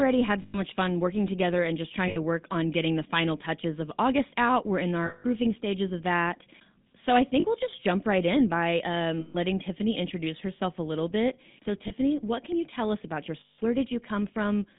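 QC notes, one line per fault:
Throughout: GSM full-rate codec. Pulse-excited vocal-tract modelling gives a plainly buzzy, gravelly roughness. The spectrogram shows a hard ceiling near 3.7 kHz and nothing below 150 Hz.
0.42–0.59, 2.08–2.17, 5.06–5.25, 7.40–7.45, 9.20–9.36, 11.88–11.92, 13.40–13.59: lost GSM frames. Repeated last-good parameters produce a metallic ring. The spectrogram shows smeared, static bands.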